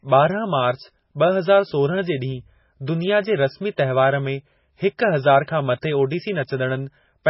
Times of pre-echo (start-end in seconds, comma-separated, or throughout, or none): 5.81